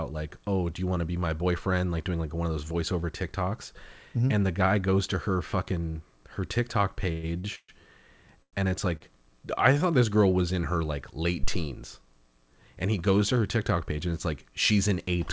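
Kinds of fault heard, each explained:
Call audio freeze: Packets were most likely held up in transit, so the jitter buffer ran dry and the receiver had to fill the wait itself. At 7.12 s it carries the last sound on as a fading buzz for about 0.11 s. At 7.55 s and 8.42 s the fill lasts 0.13 s and 0.10 s, and most of each fades into silence. Each time, the audio then resumes where it stopped, with nothing missing, just later.
Short stall from a late packet: A single packet was not in place when its turn came, leaving the jitter buffer empty for a moment. The receiver stretched the last sound until it arrived, then continued from the same point. At 7.39 s the hold lasts about 44 ms, and at 8.97 s about 39 ms. Each is heard as a sound held slightly too long with a faint buzzy dip, not a gap, and nothing is lost.
Phantom power thump: A supply, likely phantom power, switched on or off on a live input, and the sudden voltage step ran through the coupling capacitors into the signal. 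At 11.43 s this produces a deep, low thump whose initial energy decays in about 68 ms, with the disturbance lasting until roughly 11.74 s. It is an electrical thump in the signal, not an acoustic sound in the room.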